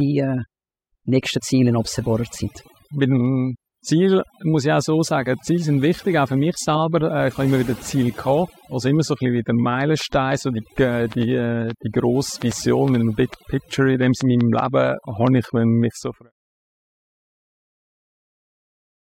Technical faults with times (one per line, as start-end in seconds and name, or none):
0.00-19.20 overdone noise removal
10.01-15.28 train of clicks